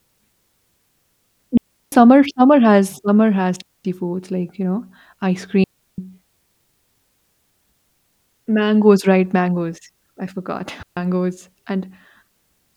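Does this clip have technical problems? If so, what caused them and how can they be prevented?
Yes. The speech cuts to clean near-silence four times: 1.57 to 1.92 s, 3.62 to 3.85 s, 5.64 to 5.98 s and 10.83 to 10.97 s, each gap lasting roughly 0.14 to 0.35 s, with no crackle or noise burst on either side. This is digital wireless dropout. The receiver lost too much of the radio data stream and briefly muted with a fast fade instead of playing damaged audio. Keeping the transmitter within range, in clear line of sight and away from radio interference prevents it.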